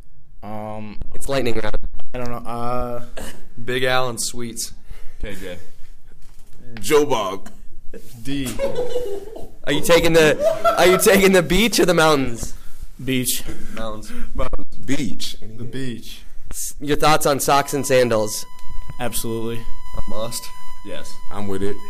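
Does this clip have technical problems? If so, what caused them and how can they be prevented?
Yes. From 17.52 s to the end of the clip, a USB whine appears: a steady tone fixed at 1 kHz, sitting roughly 30 dB below the audio. The USB bus pulls current in bursts every 1 ms, one per frame, and that periodic draw is getting into the audio path through shared power or ground, leaving a constant 1 kHz tone. To prevent it, power the audio interface separately or break the ground path with a USB isolator, a ferrite-choked cable, or a different, less loaded port.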